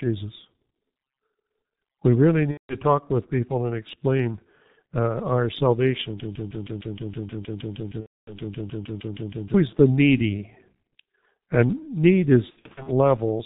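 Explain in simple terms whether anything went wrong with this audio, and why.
The whole clip went through the G.723.1 codec, an old internet-phone format. It squeezes speech hard, so everything sounds muffled and hoarse, with smeared consonants.

There are three spots of VoIP packet loss concealed by the speech codec. Pieces of audio went missing, and the decoder guessed by stretching the last sound into a buzzy tone or noise that fades. This happens at 2.51 to 2.76 s, just before "talk with people and". It happens again at 8.01 to 8.37 s, and in scattered bits at 12.50 to 12.90 s.

From 6.20 to 9.54 s there is a broken-record loop. A tiny piece, about 0.16 s long, repeats 21 times in a row, up to "the needy". The playback most likely stalled and kept replaying its last fragment. The real audio from that stretch is lost.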